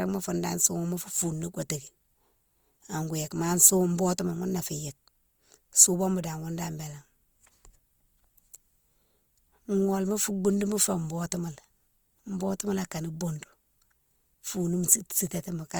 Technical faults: Opus compression

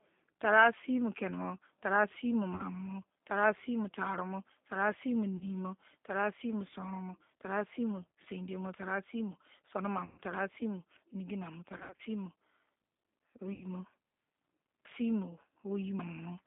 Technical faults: G.729 codec; VoIP packet loss concealed by the speech codec

